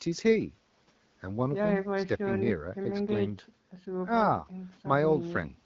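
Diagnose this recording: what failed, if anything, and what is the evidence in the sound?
Nothing failed; no fault is audible in this speech.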